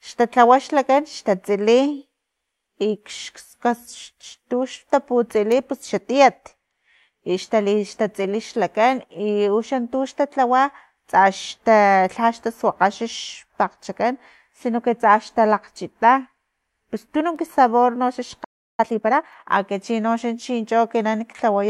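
At 18.44 s the player likely ran dry of buffered data or had its output thread held up, and with nothing to send to the output it falls into a playback stall. The speech cuts off in mid-flow and the line goes completely silent for about 0.35 s, until 18.80 s. That is long enough to hear as a clear hole rather than a click.

From 18.80 s to 19.48 s the player runs a time-compressed catch-up to clear the backlog the stall built up. It removes short slices of the signal and cross-fades across each join, which brings the speech up to 1.5 times normal speed without raising the pitch. The words sound hurried and crowded together until the rate settles at 19.48 s.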